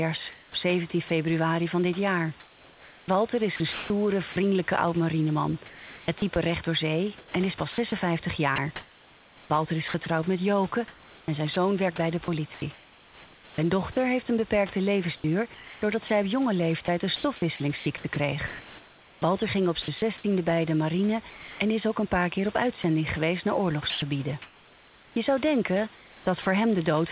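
Sound chopped by the voice detector runs from 0.32 to 26.46 s in this speech recording. It was likely caused by voice activity gating that repeatedly swapped about 7.2 s of quiet syllables and word edges for comfort noise. The whole clip stops at 4 kHz, which fits G.711 mu-law telephone coding on the call path, and room noise sits about 23 dB below the speech.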